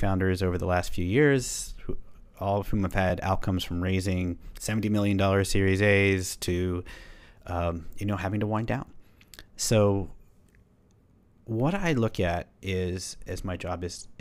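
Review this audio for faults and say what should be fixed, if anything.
Overlapping chunks at 3.10 s and 11.11 s: the speech was processed in 4-second chunks, and at these two joins the next chunk starts about 7.07 ms before the previous one ends. That short slice of audio plays twice, so the waveform repeats for an instant and the seam is heard as a brief click or tiny stutter in the speech. The fix is to trim or crossfade the overlap at each chunk boundary so every sample plays exactly once.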